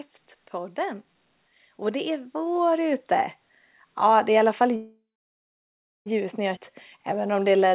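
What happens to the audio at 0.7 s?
Nothing goes wrong at 0.7 s; the speech runs on intact through the call path, carrying only its usual narrowband character with nothing above 4 kHz.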